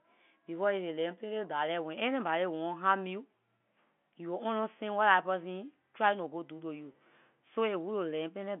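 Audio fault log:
3.59 and 6.92–6.94: packet loss with pitch repetition. About 20 ms dropped after "anybody want harm you" and "to you", each fitting one lost packet, bridged by repeating the last pitch period, so the sound briefly holds with a slight buzz.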